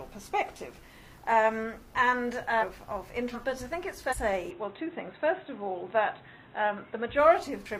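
Short glitches cut through the audio from 2.58 to 2.64 s, 3.31 to 3.36 s and 4.08 to 4.15 s. This is damaged data in a compressed stream: corrupted frames throw the decoder out of sync until it finds the next valid header. From 4.51 to 7.19 s the sound turns dull and boxy, with nothing above 3.9 kHz, a faint new noise floor about 50 dB down, no gap and no clear level change. The input likely switched to a poorer device. One more blip follows at 7.62 to 7.66 s.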